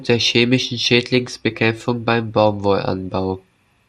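Throughout the speech, MP2 compression damage is plainly audible: dull, gurgling, granular texture as upper sub-bands drop out, likely from a low-bitrate encode around 80 kbps.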